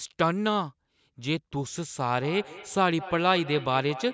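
A speech clip where, from 2.21 s to the end, each sound comes back as a ghostly repeat roughly a fifth of a second later, peaking about 15 dB below the speech. This is feedback echo between two devices: a second device in the room replays the call audio, and this microphone picks it up again, where its own echo canceller cannot remove it.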